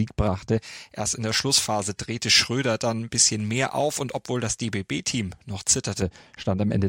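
From 0.58 s to 6.02 s, pre-emphasis is left on. The treble boost applied before recording or transmission was never undone by the matching cut. At 10 kHz the level sits about 11 dB above 1 kHz, which fits a J.17 curve. The speech sounds thin, bright and hissy on sibilants.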